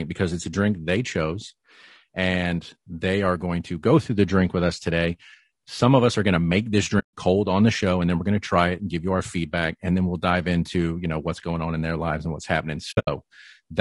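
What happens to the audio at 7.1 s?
Compressed audio frames were lost between 6.99 and 7.13 s, an AAC frame loss with muting. The decoder zeroed the missing spectrum, so the speech fades out and back in around a 140 ms silent gap. The edges are soft, not a hard cut. That span fits several consecutive frames dropping out together.

Across this moment and the whole clip, the speech sounds rough and grainy, with noise between the harmonics and a thin, synthetic top. This is likely low-delay AAC compression, such as AAC-ELD, at a low bitrate around 32 kbps.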